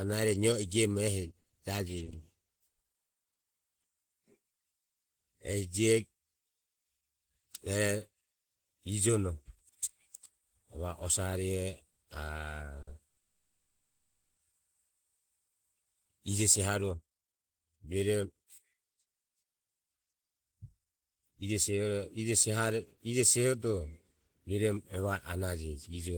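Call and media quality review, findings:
Repeated packet loss (robotic sound), 1.41–4.58 s: 13 short holes, longest 40 ms, patched by continuing the last sound, giving choppy speech. Unlike a stall, about 160 ms of audio is actually gone, with receiver concealment covering the gaps.

Repeated stalls (stutter), 11.91–13.19 s: jitter buffer underran three times, longest wait 80 ms, each bridged by extending the last sound. Nothing lost, so speech drags and stutters rather than skipping. Late or slow packet arrival, not loss.

Call audio freeze, 13.19–14.39 s: sound holds as a fading buzz or hiss for about 1.18 s, with roughly 70 ms of silence, then resumes where it stopped. Likely packets held up in transit. The buffer ran empty and delay grew by 1.18 s. No content missing, one long gap instead of repeated stutters.

Jitter buffer speed-up, 16.71–24.97 s: speech runs at about 116% speed and sounds hurried while pitch stays put. 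The buffer was draining excess delay by cutting pitch-period-sized pieces, about one and a half seconds in total. Resampling would also shift pitch.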